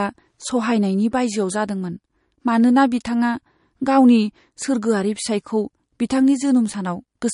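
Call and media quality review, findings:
Throughout the speech: MP3 compression, likely cause. Treble gone above 10.6 kHz. Weak spectral lines flicker frame to frame, giving a watery swirl and chirpy s sounds. That swirl separates it from a plain low-pass filter. Fits roughly 40 kbps.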